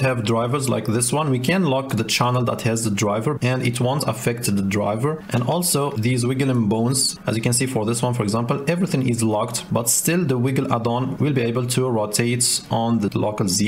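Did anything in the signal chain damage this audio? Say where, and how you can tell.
No, no stage of the signal chain audibly damaged this audio, and nothing at any point betrays a fault in wiring, conversion, buffering, processing, transmission, storage or playback.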